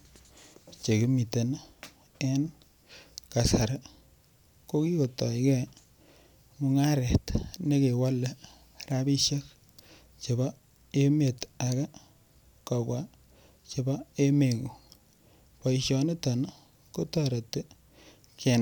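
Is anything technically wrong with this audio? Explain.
No, the speech signal shows no technical faults.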